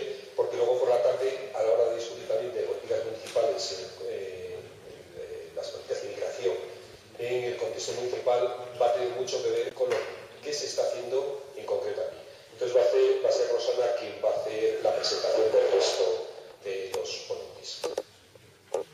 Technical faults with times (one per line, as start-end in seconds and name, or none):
9.68-9.72 damaged data in a compressed stream